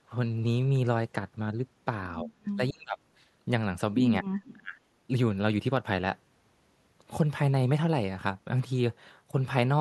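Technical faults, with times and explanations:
2.23–2.29 s, 2.56–2.98 s and 4.53–4.78 s, speech suppressed in double talk: the speech dips by about 15 dB in the brief first event, then drops much further, around 30 to 35 dB, in the two longer ones, almost cutting out. The likely cause is an echo canceller that could not tell the near talker from loudspeaker echo while both sides spoke, so it turned everything down. On a waveform the envelope caves in. A spectrogram shows the harmonics fading to near-empty patches.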